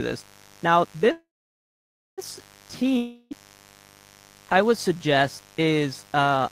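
A mains buzz at 50 Hz runs through the whole speech clip. Switching spikes add raspy harmonics, sitting well below the speech. From 1.11 s to 2.20 s there is a call audio freeze. The last sound trails off as fading noise, then goes quiet for about 0.9 s. Delayed packets are the likely cause. Speech resumes where it stopped, just over a second late, with nothing lost. At 2.97 s a long network dropout begins. A fading buzz or hiss fills 0.34 s until 3.33 s. Speech then returns further on, with about 0.34 s of audio missing.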